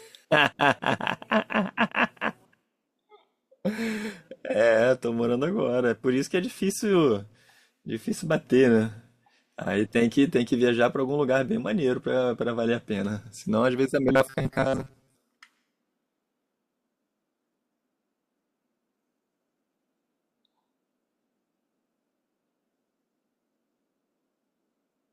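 A speech recording with a stretch of robotic sound from repeated short buffers between 14.09 and 15.15 s, likely because fresh audio stopped arriving on time and the playback side kept looping its last small block to fill the gap. Most of the real audio in that span is skipped. The loop imposes a fixed buzz at 134 Hz, which fits a block of roughly 7.5 ms, so the voice turns rigid and metallic while loosely tracking the speech.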